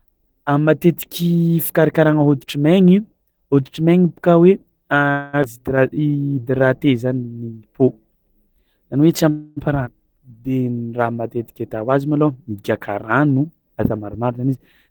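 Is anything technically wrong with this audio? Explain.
Yes, there are several network-style playback faults here, all typical of a speech call over a shaky connection.

Call audio freeze at 5.11 to 5.35 s and 9.29 to 9.59 s: the sound smears into a fading buzz for about 0.22 s and 0.27 s, likely from delayed packets draining the jitter buffer. Nothing is lost, it just pauses.

Skip ahead at 5.43 to 5.46 s and 9.85 to 9.88 s: playback jumps forward, dropping roughly 150 ms and then 200 ms, so the speech gets spliced together abruptly.

Jitter buffer slow-down at 5.94 to 6.86 s (86% speed, 134 ms added) and 10.06 to 11.78 s (89%, 197 ms added): repeated pitch periods stretch the speech without changing pitch, which sounds a bit drawn out.

Jitter buffer speed-up from 13.19 to 14.89 s: the buffer trims short pitch-period chunks, around 150 ms in total, so the speech runs at 109% and sounds slightly rushed.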